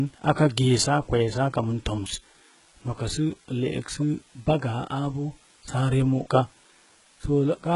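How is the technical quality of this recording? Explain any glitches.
The technical quality is poor, with two faults running through the whole speech recording.

Low bit depth with dither lasts from start to finish. The signal was stored with very few bits, which fits a 9-bit word, and dither was added before rounding. That turns the rounding error into a steady, even hiss about 30 dB below the speech, with no grainy distortion.

The treble across the whole clip sounds like HE-AAC compression, likely at a very low bitrate around 12 kbps. The codec keeps the lower spectrum and rebuilds the highs by copying lower bands upward under a coarse envelope, so harmonics stop lining up. The s sounds come out gritty and metallic, and nothing is present above 11.1 kHz.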